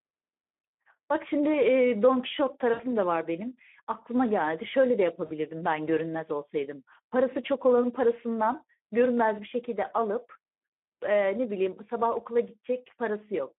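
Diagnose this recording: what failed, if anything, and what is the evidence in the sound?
Speex codec, throughout the 13 s of speech, at the codec stage: the sound is hoarse and noisy, confined to a 200 Hz to 3.4 kHz band. The CELP coder is short of excitation bits, roughly what an 11 kbps setting would produce, so grain replaces natural voicing.

VoIP packet loss concealed by the speech codec, at 2.73 to 2.84 s and 5.25 to 5.31 s, from the network: about 60 ms and 40 ms of sound are stretched into a fading concealment sound. The decoder repeats its last pitch and filter with falling gain, and recovery lags behind.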